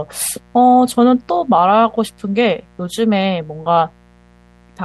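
Sharp switching spikes from 60 Hz mains leak in throughout, producing mains buzz: a steady, raspy drone rich in harmonics, sitting well below the speech.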